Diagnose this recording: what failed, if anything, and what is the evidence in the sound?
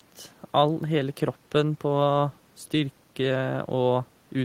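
Nothing failed, and the sound gives no evidence of a fault in any stage of the recording.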